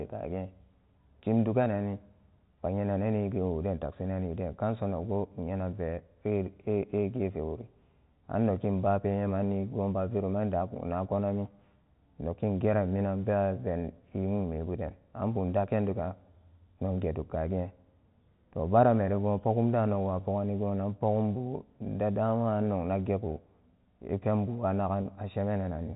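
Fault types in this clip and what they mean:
Packet loss with pitch repetition: near 25.02 s, about 30 ms of speech goes missing, which fits a single lost packet. The receiver bridges the gap by repeating the last pitch period, so instead of silence there is a brief held, slightly buzzy tone until the speech resumes at 25.05 s. This separates it from a plain dropout, which would leave a hard gap or click, and from the steady 4 kHz band limit of the G.711 telephone channel.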